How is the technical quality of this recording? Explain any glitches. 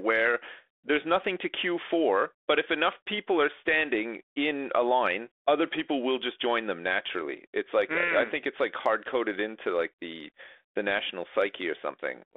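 The recording is telephone-band speech, limited to roughly 300 Hz to 3.5 kHz, with the light coding roughness typical of G.726 ADPCM at 32 kbit/s. One glitch stands out.

From 11.08 to 11.11 s there are bit errors on the ADPCM link. A very low error rate, well under one percent, flipped bits across a few frames. Each corrupted code throws off the decoder's step size and predictor, so the error keeps ringing after the flipped bit. The result is a short pop and rough burst with a brief change in level lasting about 30 ms.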